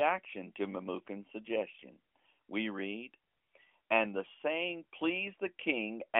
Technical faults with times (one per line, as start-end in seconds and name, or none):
none